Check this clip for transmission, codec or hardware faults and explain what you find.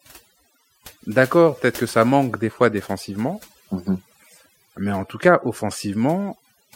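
Overdone noise removal runs throughout the speech. A noise reduction stage set too hard cuts individual frequency bands whenever they sit near its noise estimate. Quiet parts of the voice are cut with them. In pauses the background drops and breaks up into twinkling specks.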